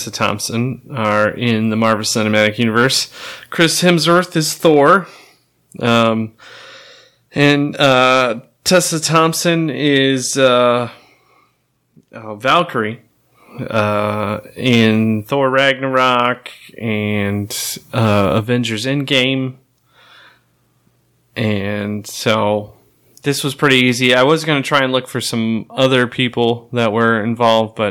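Hard clipping runs throughout the speech: driven about 6 dB past full scale, a small fraction of peaks are cut flat, adding crackle on the loudest moments.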